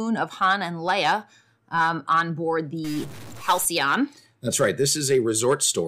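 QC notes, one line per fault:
2.84–3.65 s, stuck bit: just after "um on board", one sample bit likely stops toggling, so roughly half the values shift by a fixed step of around -35 dBFS, adding a harsh, buzzy distortion that follows the waveform and leaves gaps noisy.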